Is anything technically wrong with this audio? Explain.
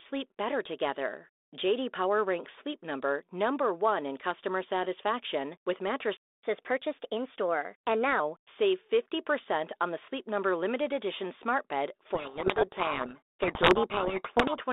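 Yes, there are three problems in this speech clip.

At 6.17 s, right after "in customer satisfaction with", the audio just stops for about 265 ms and then picks up where it left off. That's a playback stall. The sound simply drops out mid-flow, most likely because the player ran dry of buffered data or its playback thread got held up for a moment, so there was nothing to send to the output until it recovered.

From 6.43 s to 8.2 s you get the catch-up at higher speed. Once the stall clears, the player runs its backlog at about 1.15 times normal speed by resampling, so timing and pitch rise together, roughly two semitones. The speech sounds a bit hurried and chipmunky for that stretch, then settles back to normal once the lost quarter-second has been recovered.

From 12.14 s to 14.6 s, after "limited edition smart bed", there's a codec payload misread. The line is G.726 telephone audio, band-limited to about 300 Hz to 3.6 kHz, and it sounds consistent with the usual 32 kbit/s mode. 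Here, though, the two ends disagree on the bit order inside each G.726 code word. The decoder still gets frames that look valid, but it reads the wrong values from them, so the speech ends up buried under harsh, gritty distortion until the clip nearly ends.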